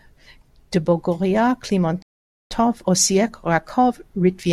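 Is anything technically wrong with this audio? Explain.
Yes. From 2.02 to 2.51 s the speech drops abruptly into silence, then picks up exactly where it left off with nothing missing. This is a rebuffering stall: playback ran out of downloaded audio and paused until more arrived, adding about 485 ms.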